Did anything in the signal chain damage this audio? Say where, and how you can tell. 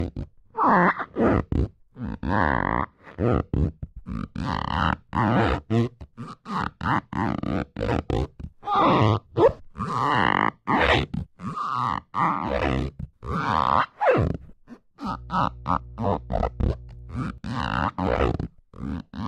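Yes. There's mains hum in the analogue wiring from 15.06 to 17.38 s, a steady 60 Hz tone around 20 dB below the sound, from a ground loop or nearby transformer.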